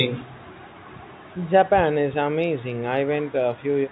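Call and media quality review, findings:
No faults found in this speech clip. The band stops at 4 kHz, as expected from the G.711 mu-law telephone coding, and any quantisation noise is at most faint.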